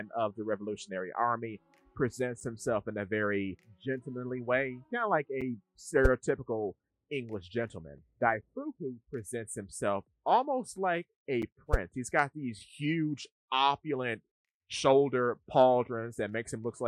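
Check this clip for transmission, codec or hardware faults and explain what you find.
One fault is present: a gap between chunks, repeating four times. At 2.40, 5.41, 8.42 and 11.42 s the sound drops out for 6.5 ms. The audio was delivered in 3.0 s chunks, and silence is inserted at each join, producing regular, short holes.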